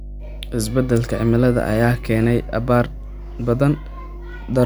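A steady, low drone sits under the speech from start to finish, a dull tone at 50 Hz with low harmonics above it, at roughly 15 dB below the speech itself. This is mains hum: the 50 Hz power-line frequency has leaked into the signal path, typically through a ground loop between connected equipment or magnetic coupling from a nearby transformer, and it stays constant because the supply never stops.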